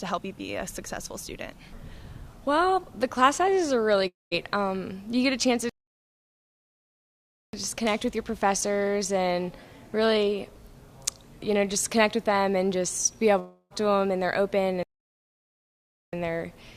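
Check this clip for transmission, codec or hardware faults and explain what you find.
Two kinds of fault stand out: two long network dropouts and two playback stalls.

Long network dropout, 4.07 to 4.34 s and 13.39 to 13.73 s: the sound breaks into a fading buzz, then goes quiet (about 180 ms and 30 ms of silence), resuming with roughly 240 ms and 320 ms of material missing. This is likely lost packets, with the receiver stretching the last sound to conceal the gap. A spectrogram shows smeared, repeating bands decaying into a blank or low-noise strip.

Playback stall, 5.69 to 7.53 s (1.84 s) and 14.83 to 16.13 s (1.30 s): the sound cuts off mid-flow into silence, then carries on again. The likely cause is the player running short of data or its output thread being blocked. On a waveform each stall is a flat, near-silent gap with hard edges. On a spectrogram it is an empty vertical band with no decaying tail before it.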